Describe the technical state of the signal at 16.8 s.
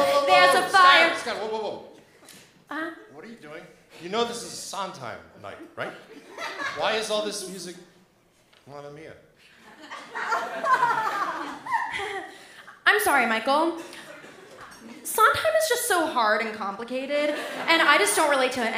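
At 16.8 s the signal is intact, with no dropout, distortion, glitch or other technical fault audible at that point.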